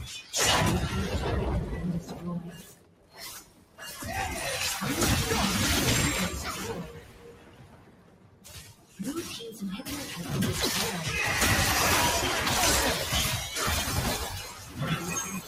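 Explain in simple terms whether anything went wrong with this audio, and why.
A noise suppressor meant for speech was left on this sound. It mistakes steady tones and fading tails for noise, so the level pumps up and down rather than fading evenly.

There is also sound cut by the noise suppressor at 2.01–2.23, 2.44–4.02, 6.8–9.0 and 14.22 to the end. Held parts sink and tails vanish early, but sudden hits still come through.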